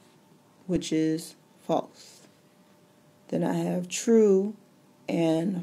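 No technical faults can be heard anywhere in the recording, and the signal keeps its continuity throughout.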